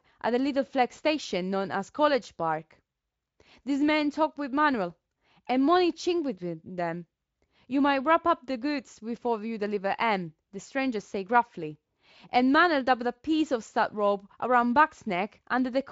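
No technical faults are audible.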